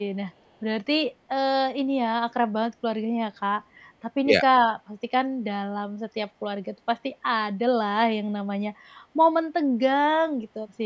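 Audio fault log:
4.25–4.44 s, speech suppressed in double talk: the speech sinks by about 5 dB in short patches adding up to roughly a tenth of a second. This is likely an echo canceller briefly mistaking the talker for loudspeaker echo while both sides spoke, and turning the signal down.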